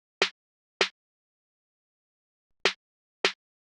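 At 2.69 s, a corrupt FLAC frame: flipped bits went unchecked, so the decoder predicted from wrong values until intact audio resumed.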